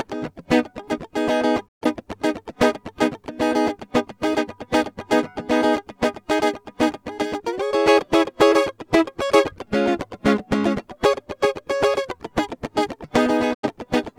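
At 1.67 s the music fades out over about 20 ms into a digital broadcast dropout, silent until 1.86 s. A second dropout follows at 13.53 s and lasts until 13.68 s. The receiver stopped getting valid frames and muted rather than play corrupt data, so the missing programme, about 128 ms and 85 ms respectively, is simply gone. The hole lengths fit three and two lost frames. Each is heard as a brief gap before the music resumes.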